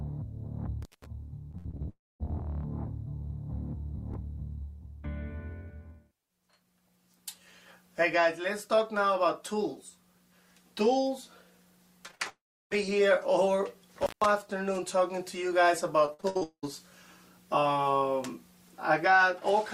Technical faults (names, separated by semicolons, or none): intermittent contact; repeated packet loss (robotic sound); long network dropout